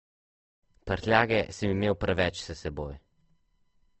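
Throughout, Opus compression likely at a low rate, around 16 kbps, leaves the speech grainy and rough; on a spectrogram, energy stops sharply at about 8.3 kHz.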